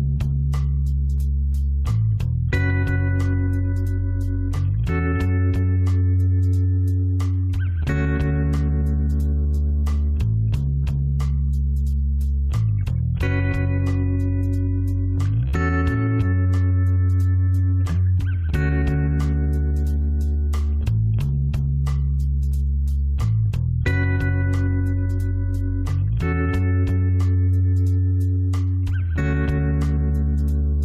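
At 29.14 to 29.19 s, near the end, there is damaged data in the compressed stream. Part of the encoded data there is corrupted. The decoder misreads those frames and loses sync until it finds a valid header. This brief glitch sounds like a short squawk or blip.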